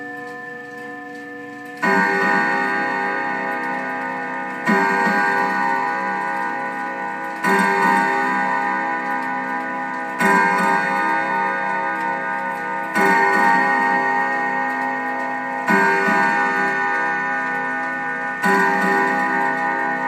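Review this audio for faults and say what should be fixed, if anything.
A doubled audio track runs through the whole clip. A second full-band copy trails the original by roughly 0.4 s, about 5 dB quieter, with no decay or room colour of its own. The likely cause is the same signal being captured twice, once through a slower path. To prevent it, feed the recording from a single route so the audio reaches the mix only once.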